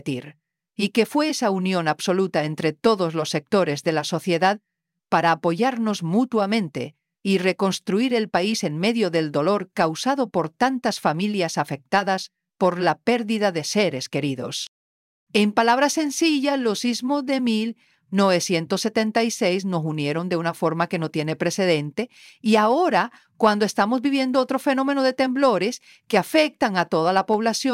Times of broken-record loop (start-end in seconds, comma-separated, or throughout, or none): none